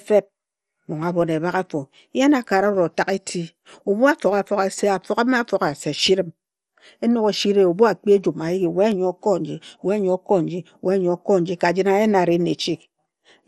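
Throughout the speech, MP2 compression is plainly audible. It is likely from low-bitrate Layer II coding, which fits 64 kbps. Nothing is heard above 14.3 kHz, and the sound turns dull and gurgling.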